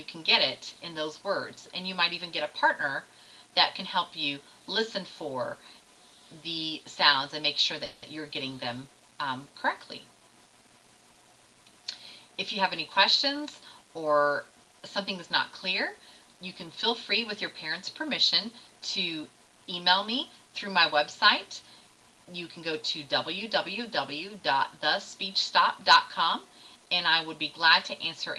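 From 7.85 to 8.04 s the sound is held and fades as a buzz or hiss, a call audio freeze. Delayed packets likely emptied the jitter buffer, adding a 170 ms gap with nothing lost. At 11.13 to 11.17 s one sound lingers about 20 ms too long with a slight buzz or dip, a short stall from a late packet that the receiver bridged by stretching. Between 21.62 and 22.72 s the audio sounds rushed at an unchanged pitch, running at 107% speed. This is a jitter buffer speed-up that trims roughly a tenth of a second of pitch periods to reduce delay. Across the clip, high frequencies stop near 12 kHz, which fits an Opus call path.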